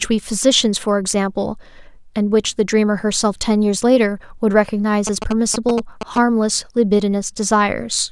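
GSM signalling bursts interrupt the speech from 5.07 to 6.18 s. A nearby 2G phone's short radio bursts get rectified by the audio circuitry, producing a galloping dit-dit-dit of brief buzzes at about 217 Hz, sitting roughly 5 dB below the speech.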